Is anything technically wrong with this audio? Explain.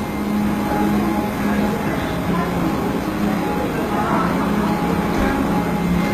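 Yes. Throughout, the treble sounds gritty and metallic, with nothing above 14.9 kHz, which points to HE-AAC compression, likely at a low bitrate near 20 kbps. Only the lower spectrum is coded, and the treble is copied up from lower bands, so its harmonics don't match the original.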